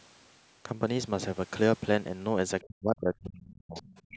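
From 2.61 to 3.76 s the talker's level collapses, at its deepest by roughly 40 dB, with about a second of the stretch affected in all. The sound dips, thins and drops out in pieces rather than fading smoothly. This is speech suppressed in double talk. Both ends were likely talking at once, and the echo canceller, unable to tell the local talker apart from loudspeaker echo, attenuated everything it picked up.

From 3.75 s to the end of the clip, the other side's voice leaks through. A second voice is audible underneath, around 20 dB below the talker, whose speech, like the rest of the call microphone path, carries nothing above 8 kHz. The likely cause is that the far-end audio played from the device's loudspeaker reached the microphone and the echo canceller left part of it in place.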